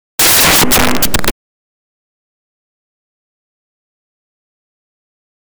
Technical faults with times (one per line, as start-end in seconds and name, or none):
0.19-1.29 integer overflow